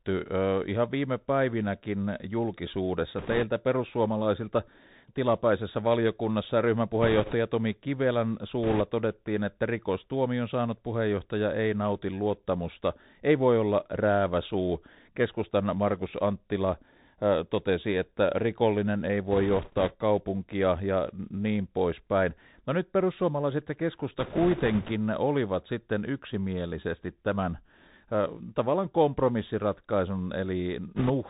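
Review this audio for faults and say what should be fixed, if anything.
Throughout the clip the speech sounds narrow and boxy, with nothing above 4 kHz, scratchy s sounds, a granular hiss underneath, and distortion on loud high sounds. This is the Bluetooth CVSD headset codec. Its one-bit up-or-down coding with an adapting step cannot follow fast, loud changes, which fits a 64 kbps CVSD link. To prevent it, record over a wideband path such as a wired microphone or a headset running mSBC or LC3 instead of CVSD.

Bursts of rushing, crackly noise sit on the speech at 3.18–3.44 s, 7.02–7.34 s, 8.63–8.81 s, 19.31–19.94 s, 24.19–24.92 s and 30.96–31.11 s, without any loud clicks. These are bit errors on a Bluetooth voice link, at an error rate of a few percent. Each flipped bit nudges the CVSD output only slightly and then fades, so the result is crackle rather than pops. To prevent them, keep the headset close to the receiver and away from interference so the radio link stays clean.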